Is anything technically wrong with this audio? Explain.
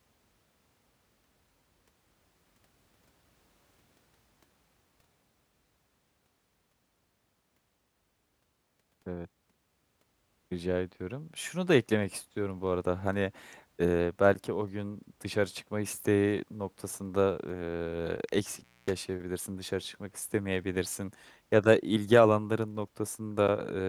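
Yes. From 18.56 to 18.96 s the speech shows an intermittent contact fault: a loose cable or plug briefly opens, dropping the signal for about 240 ms with crackle at each edge and faint hiss between. The waveform collapses to near-flat with sharp spikes at both boundaries, and the spectrogram shows vertical broadband streaks framing a dark gap.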